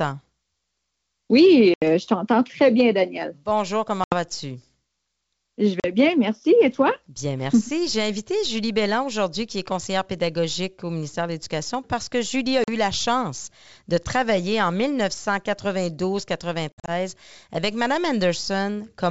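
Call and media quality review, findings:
Packet loss on an ADPCM call (G.722 path), five dropouts: 1.74–1.84 s before "je t'entends très bien", 4.04–4.15 s, 5.80–5.87 s before "bien merci", 12.64–12.70 s before "la chance de travailler", 16.72–16.91 s with scattered gaps, longest run 60 ms. Hard-edged silent holes of 40–80 ms, 120 ms in total for the last. The decoder's predictor and step size lose sync with the sender, so speech resumes with brief distortion.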